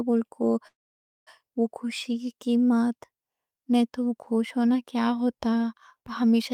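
A call audio freeze in this speech recording was likely caused by packets stalling in transit until the receiver's jitter buffer ran dry. From 0.67 to 1.29 s the last sound is stretched into a short, fading buzz or hiss and then about 0.53 s of silence. Delivery then resumes at "خوشی کی" exactly where it halted. Nothing is lost, but everything afterwards arrives roughly 0.59 s later than it should.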